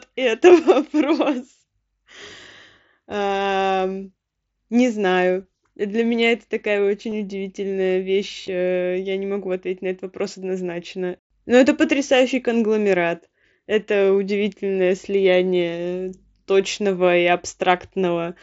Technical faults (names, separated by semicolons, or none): concealed Bluetooth headset packet loss